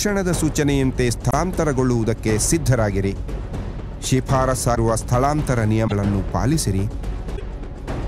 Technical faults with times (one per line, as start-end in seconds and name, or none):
1.29-1.33 broken MP3 bit reservoir
4.74-4.77 broken MP3 bit reservoir
5.87-5.92 broken MP3 bit reservoir
7.35-7.41 broken MP3 bit reservoir